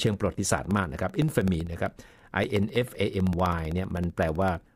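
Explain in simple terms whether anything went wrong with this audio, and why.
A steady ticking runs through the speech from 0.07 s to 4.68 s, repeating every 64 ms, about fifteen times a second. These are periodic USB or driver dropouts. Something in the system keeps interrupting the audio connection on a fixed schedule, and each time roughly a millisecond of sound is lost and replaced by silence. Those tiny gaps, around seventy of them, are evenly spaced, so they come across as a regular tick whenever the speech is sounding.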